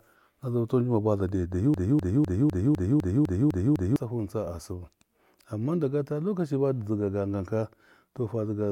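Right after "baza dai", at 1.74 s, the speech catches on a fragment about a quarter of a second long, 252 ms, and repeats it exactly, back to back, nine times until 3.96 s, a stuttering broken-record loop. This is likely a stall in the player, encoder or stream, which kept resending the last piece it held instead of moving on. Whatever should have been heard across those two seconds is missing.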